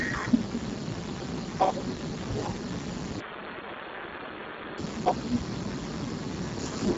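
Right from the start the whole clip carries heavy Speex codec damage. The speech sounds hoarse, noisy and close to robotic, which fits a very low bitrate setting, and there's nothing above 7.7 kHz. The top band is just a thin, noise-like fill.

From 3.20 s to 4.78 s the sound suddenly turns dull and boxy, with everything above 3.8 kHz gone. There's no gap and no real level jump, just a faint new noise floor well under the speech. That's likely the input switched to a poorer device, then back.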